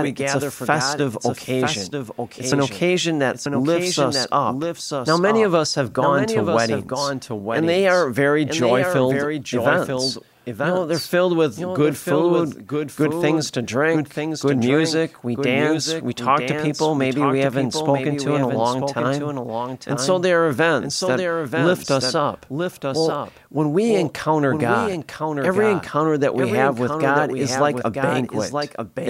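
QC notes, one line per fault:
Throughout: doubled audio track. A second copy of the speech runs about a second behind the first, somewhat quieter, around 5 dB down. It carries the full frequency range. It has no reverb tail and no room colour, so it reads as a plain repeat rather than an echo. Each phrase is heard again a beat later. The likely cause is the signal being captured twice, once through a slower path, and mixed together.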